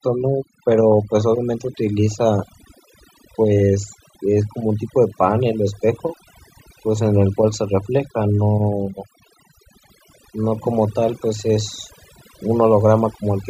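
The recording is speech, and it carries overdone noise removal from start to finish. A noise reduction stage was set far too aggressively. It pulls individual frequency bands down hard whenever they sit near its noise estimate. The pauses fall to near silence, dotted with twinkling, chirpy specks. The quieter parts of the voice are stripped away along with the noise.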